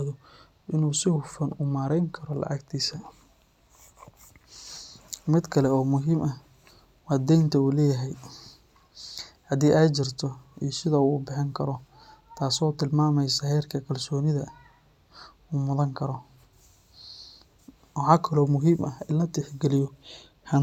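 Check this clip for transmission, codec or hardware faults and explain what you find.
No transmission, codec or hardware faults can be heard here.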